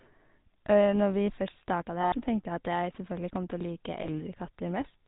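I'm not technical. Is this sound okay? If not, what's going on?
No. The whole clip passes through the GSM full-rate codec, the old mobile-phone system. It cuts everything above 4 kHz and rebuilds the voice from a rough model, so the speech sounds buzzy and gravelly. That grit is what separates it from a plain muffled phone line.

There are also lost GSM frames at 2.02 to 2.15 s, just before "tenkte jeg at jeg", and at 4.02 to 4.07 s. Instead of going silent like a simple dropout, the sound briefly freezes into a rough, metallic ring while the phone repeats the last good moment.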